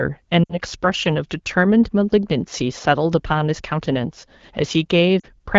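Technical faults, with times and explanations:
0.44–0.58 s and 5.19–5.26 s, lost AMR speech frames: speech briefly smears and drops away for about 60 ms, then 40 ms, which fits three and then two lost 20 ms frames. The decoder repeats its last good pitch and vocal-tract settings with falling gain, so speech blurs before returning.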